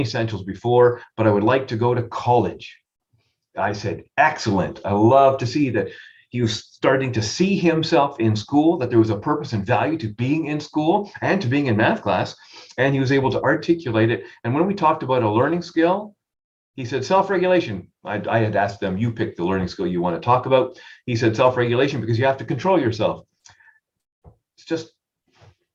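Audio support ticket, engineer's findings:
No audible faults found.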